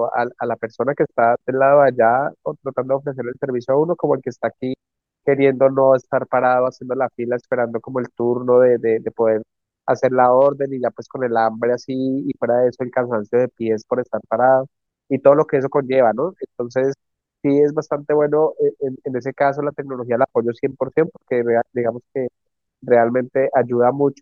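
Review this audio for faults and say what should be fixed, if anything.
Nothing stood out on listening to this speech, so there is nothing here that needs fixing.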